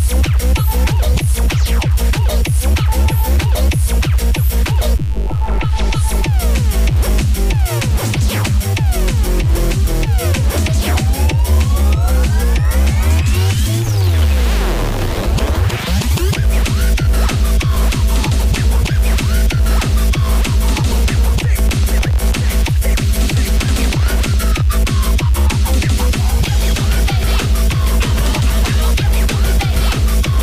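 From start to finish the recording carries a mains buzz based on 50 Hz. Sharp switching spikes from a dimmer, a rectifier or an unshielded cable enter the signal path twice per mains cycle. They spread energy across a long series of 50 Hz harmonics reaching into the kilohertz range. The result is a steady, raspy buzz rather than a smooth hum, sitting roughly 30 dB below the wanted sound and audible beneath it throughout.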